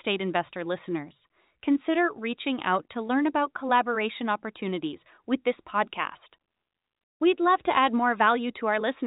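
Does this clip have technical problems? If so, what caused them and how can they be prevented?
No, the speech comes over the G.711 telephone coding working as intended, with the sound held below 4 kHz as that format requires, and nothing in the signal calls for a fix.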